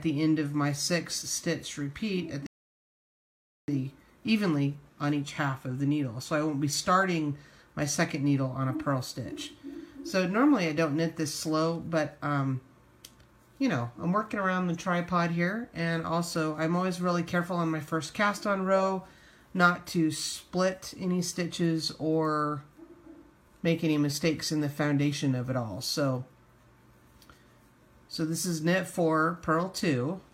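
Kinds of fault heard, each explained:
Rebuffering stall: playback ran out of downloaded audio at 2.47 s and fell silent until 3.68 s, adding about 1.2 s. Unlike a dropout, which skips material, the sound resumes exactly where it stopped, so nothing is missing.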